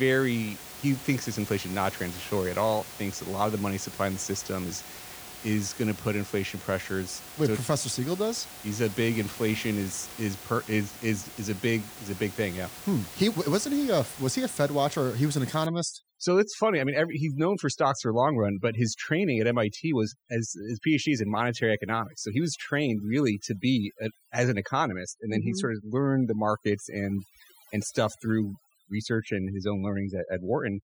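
From 15.66 s, just after "was an", to the end, the background drops and breaks up into twinkling specks. This is overdone noise removal.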